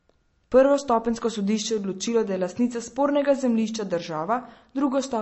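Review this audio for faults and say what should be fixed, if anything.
Throughout the speech there is audible MP3 compression damage, likely from encoding at a starved bitrate, which fits something around 35 kbps. The encoder has dropped everything above 8 kHz, so sibilants sound dull and watery, and weak frequency lines flicker in and out between frames, giving a swirling texture. On a spectrogram this appears as a flat ceiling at 8 kHz with speckled, patchy gaps below it. Re-encode from the original source at a substantially higher bitrate or in a lossless format.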